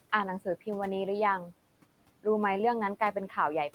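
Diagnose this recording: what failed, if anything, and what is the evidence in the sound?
The failure sits in call processing, where the noise suppressor is working on the whole clip and pulling the background down by about 18 dB in every band it judges to be steady noise. The room noise, about 20 dB below the speech, dips away in the gaps between words and comes back up underneath them. That happens because the suppressor re-decides its gain frame by frame, so it holds back its cut wherever speech is present. This is the signature of noise suppressor artifacts.

The same suppressor also cuts into the speech itself between 3.0 and 3.37 s. There, it misreads quiet speech energy as noise and attenuates it along with the background, by about 10 dB at the deepest point. Only about a tenth of a second within that span is affected, so the loss is brief: soft sounds and word endings come out swallowed and faint. 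This is speech cut by the noise suppressor.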